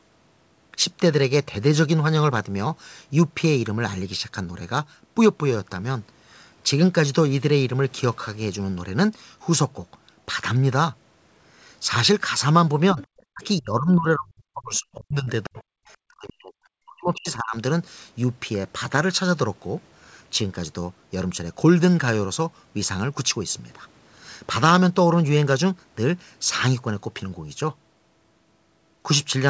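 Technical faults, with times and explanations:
12.93–13.0 s, 13.32–13.42 s, 13.6–15.29 s, 15.45–15.6 s and 16.04–17.56 s, speech suppressed in double talk: the echo canceller likely mistook overlapping talk from both ends for loudspeaker echo and pulled the level down. The speech dips by about 10 dB in the first short patch, then by as much as about 40 dB in the later ones. It nearly vanishes for stretches of roughly one and a half seconds at 13.6 s and 16.04 s.
13.42–13.46 s, 14.75–14.79 s and 15.45–15.63 s, other side's voice leaking through: the loudspeaker pickup was likely not fully removed from the microphone signal. A faint second voice surfaces as brief scraps, about 30 dB below the talker in the first two and about 25 dB below in the longer last one. These fragments fall inside or right beside the suppressed gaps, where the talker's own speech is pulled down.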